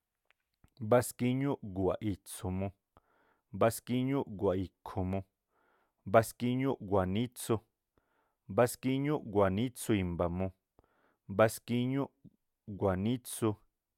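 Nothing technically wrong can be heard in this speech recording at any point, with no faults found from beginning to end.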